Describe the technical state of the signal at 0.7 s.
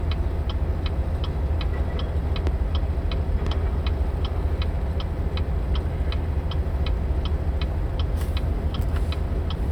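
At 0.7 s the signal is intact, with no audible fault present at that moment.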